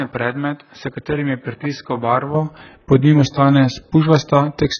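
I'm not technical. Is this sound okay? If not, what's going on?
No. For the first 2.34 seconds the speech sounds dull, boxy and noticeably quieter, with a faint added hiss, and then it clears up with no gap. That points to the input having been switched to a poorer device, likely a weaker microphone or headset, which carries nothing above about 5.8 kHz.

Across the whole clip there is also heavy damage from compression: the speech is muffled, smeared and warbly, with no clear treble above about 6.5 kHz. This sounds like AAC compression at a very low quality setting, the likely cause.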